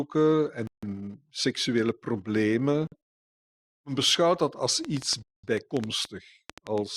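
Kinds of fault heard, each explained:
Bluetooth stall: The speech cuts to silence three times, for 154, 48 and 209 ms, likely because the headphone buffer ran dry awaiting resent packets.
Train of clicks: After "beschouwt dat als", about ten uneven clicks, 6.4 per second, tick over the speech, about 10 dB above it, likely from interference.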